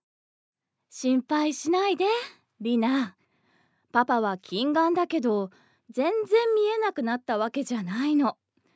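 No technical faults can be heard in this recording.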